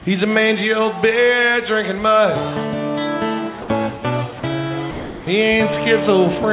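At 3.62 to 3.68 s, 4.40 to 4.43 s and 4.91 to 5.27 s the sound gives way to flat, steady noise, likely sound dropped by the voice detector. Unlike packet-loss concealment, nothing is repeated or smeared, and the full sound returns when the detector triggers again.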